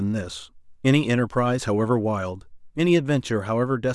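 No technical faults can be heard in this recording.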